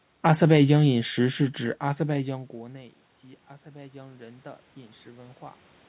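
Automatic gain rising from 3.62 to 5.69 s in this speech recording: the input level falls by about 13 dB, and the gain control slowly lifts its gain by about 4 dB over those two seconds, so voice and background noise swell together.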